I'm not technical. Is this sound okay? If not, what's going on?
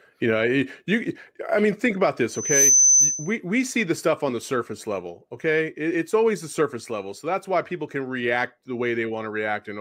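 No. From 2.29 to 3.37 s there is loudspeaker feedback squeal: the microphone picks up its own loudspeaker, and one pitch, around 6.1 kHz, keeps looping and growing. It swells over roughly a third of a second into a piercing whistle that drowns the speech.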